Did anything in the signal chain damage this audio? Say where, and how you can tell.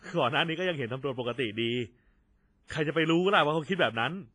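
Yes, at the codec stage, throughout the speech. The sound rings and smears, with a washy hiss that swells and fades with the signal. Nothing remains above 10.6 kHz. This is likely heavy WMA compression, consistent with a low bitrate near 24 kbps, where coarse quantisation discards weak detail.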